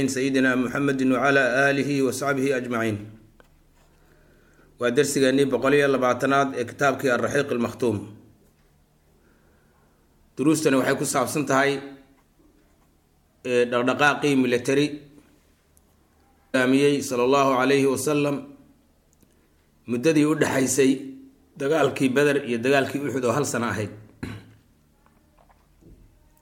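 At 16.54 s the sound abruptly jumps forward with a short blip at the join, so the audio before and after the cut does not connect. This is a stream segment skipped. The likely cause is that one chunk of the segmented stream failed to arrive or load, and the player moved straight on to the next chunk rather than stalling. The content from that missing segment never plays, leaving a clean gap in continuity instead of silence.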